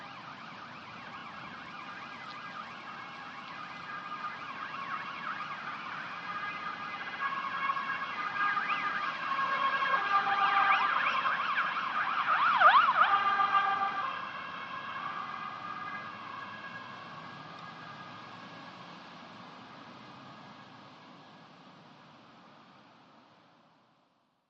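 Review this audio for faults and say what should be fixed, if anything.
Repeated frames: compressed blocks were resent, so the decoder replays them as a stutter at 1.20 s (32 ms, once) and 7.02–7.22 s (64 ms, three extra times, adding 192 ms). Checking frame sequence numbers and discarding duplicates before decoding would prevent it.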